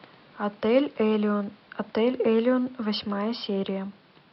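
Nothing stood out on listening to this speech clip, with only a faint room noise sitting about 31 dB below the speech.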